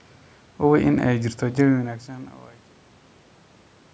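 No technical faults are audible in this speech recording. The level fades out smoothly from roughly 1.5 s onward, and the call microphone processing leaves nothing above 8 kHz.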